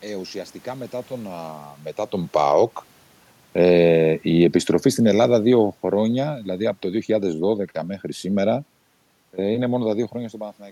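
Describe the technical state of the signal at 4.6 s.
At 4.6 s the automatic gain is falling, from 2.21 to 7.67 s after "ουσιαστικά μετά τον μετά", lowering level by about 8 dB; room noise sinks with the speech, unlike a talker moving away.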